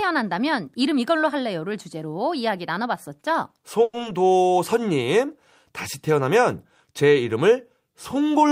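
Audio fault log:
3.83–3.95 s, call audio freeze: the last sound is carried on as a fading buzz for about 100 ms and ends in a 20 ms silence, then resumes where it stopped with nothing lost. This is likely packets held up in transit and the jitter buffer running dry, adding roughly 100 ms of delay.
4.03–4.06 s, skip ahead: playback jumps forward with only a 10 ms bridge, dropping around 70 ms of audio and joining the two sides almost directly. A stretch of audio was dropped while later audio was already waiting, which trims back some of the delay built up by the freeze.
4.33–4.87 s, jitter buffer slow-down: the audio runs at 91% speed with unchanged pitch, so sounds are drawn out. The buffer was building a reserve by repeating single pitch periods and bits of pauses, adding 57 ms in total over this stretch.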